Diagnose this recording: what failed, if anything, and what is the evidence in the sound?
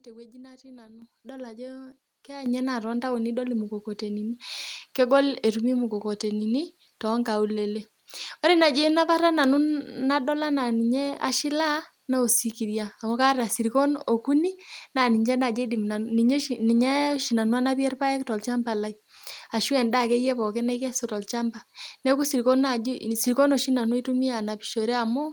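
Call processing stepped up the microphone volume twice. At 1.02 s, after "tewueji natii nanu", speech and background jump together by about 10 dB. At 2.46 s, before "inye naa tontaoni idol", they rise by about 8 dB. Gain control found the input too quiet and raised the device's input volume in single steps.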